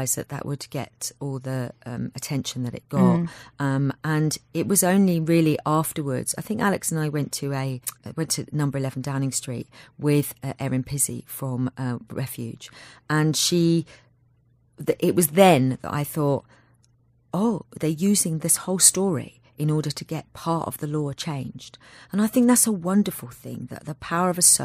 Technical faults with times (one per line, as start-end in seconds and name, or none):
none